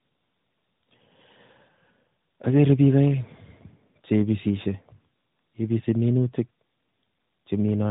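Throughout the speech the sound is rough, muffled and warbly, with nothing above about 3.8 kHz. This is tandem speech coding: the call was decoded and re-encoded at each link, passing through two speech coders in a row. The grainy edge fits an ADPCM stage like G.726 at 32 kbit/s, carried over G.711 A-law. The warble fits AMR-NB at 12.2 kbit/s, which was coding audio that was already degraded.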